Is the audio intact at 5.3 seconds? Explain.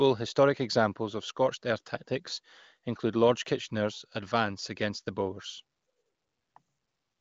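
Yes, the audio is intact at 5.3 seconds: the speech passes through there without any dropout, glitch or distortion, carried by the AMR wideband (HD Voice) codec at 23.05 kbit/s, a rate high enough that the coding stays clean, with nothing carried above about 7.4 kHz.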